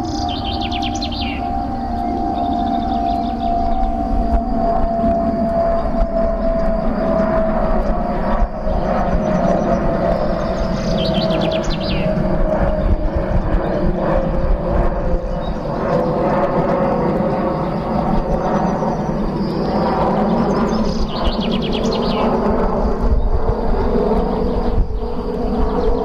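No technical faults are audible.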